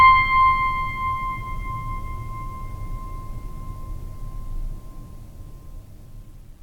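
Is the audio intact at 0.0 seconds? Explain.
Yes, the music is intact at 0.0 seconds, with no dropout, click, distortion or other fault at that moment.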